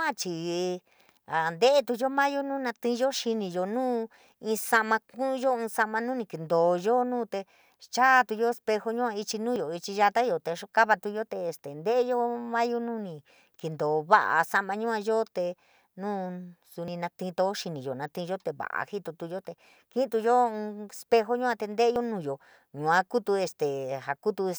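At 9.56 s, 16.88 s and 21.96 s the speech jumps abruptly, skipping roughly a fiftieth of a second at the first two points and about twice that at the last. This is likely a dropped buffer (overrun): samples were overwritten before being collected, so the audio on either side is butted together. Unlike an underrun dropout, no silent gap is heard. The sound simply leaps forward.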